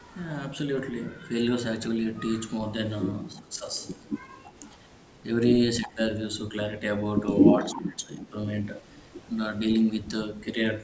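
From 3.34 to 3.74 s the speech dips by about 10 dB, likely speech suppressed in double talk, with the echo canceller ducking the talker while the far side spoke. At 4.22 to 4.73 s there's an echo leak: a faint copy about 30 dB down, trailing 327 ms behind. It returns around 5.82 to 5.92 s at about 20 dB down, overlapping another duck of about 15 dB at 5.84 to 5.98 s. The biggest one is 7.52 to 8.33 s, with the speech dropping about 20 dB and a leaked echo slipping through at 7.59 to 7.8 s.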